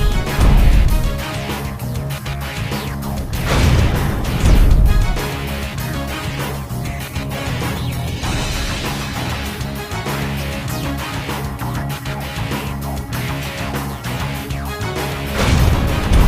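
At about 6.08 s there's a call bitrate drop. The bandwidth estimate fell and the encoder was squeezed onto far fewer bits. For roughly 3.7 s the sound goes coarse and watery, with the top end dulled, which fits a fall from around 64 kbps to somewhere near 17 kbps. The codec is dropping high frequencies to cope. It clears up at about 9.83 s, once the bitrate climbs back.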